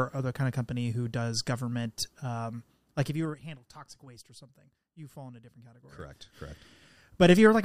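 A gain control moves in unsmoothed 2 dB steps, each one clicking, which produces zipper noise: a fast, buzzy drop of roughly 20 dB from 3.0 to 3.44 s, after "who does government um", then a slower ticking rise from 5.76 to 7.32 s, after "fall in a different".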